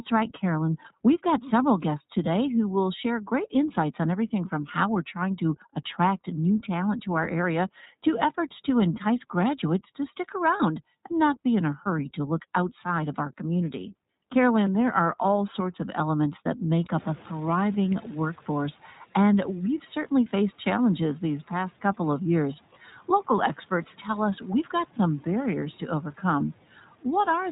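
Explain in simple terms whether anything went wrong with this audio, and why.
Three things went wrong. The whole recording passed through the iLBC codec, a phone codec that removes everything above 4 kHz, so the speech sounds muffled, rough and slightly synthetic throughout.

At 10.58 s, just after "entice graduates to stick", one 20 ms packet went missing. The decoder covered this lost iLBC frame with a brief buzzy, held sound, and the speech recovers immediately before "and not be in".

Around 17 s, after "of elements that make", the room noise suddenly gets louder. The noise suppressor is catching up from 16.98 s to 18.73 s, so the noise comes through with less reduction at first and then drops as the suppressor adjusts, just before "and we've certainly faced".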